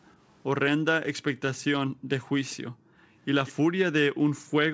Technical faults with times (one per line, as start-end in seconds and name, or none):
1.92-2.08 background gated by the echo canceller
2.72-3.01 background gated by the echo canceller
3.46-3.53 echo leak